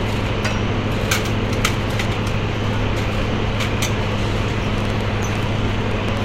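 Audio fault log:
4.78–6.18 s, train of clicks: about ten near-identical pulses at roughly 7 per second, unevenly spaced, peaking about 10 dB above the sound. Unlike random crackle, the matching shape and sustained run point to likely interference or a faulty connection.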